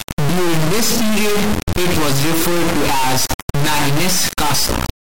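From the first moment to the end, the speech has turned into a brutal, buzzing square wave, which is the classic sound of integer read as float. It fits 32-bit integer samples being interpreted as 32-bit floats. Those bit patterns decode to either tiny values near zero or numbers way past full scale, so the output just slams between silence and the clipping rails. What you hear is harsh, maxed-out buzz that cuts to nothing in the quietest stretches.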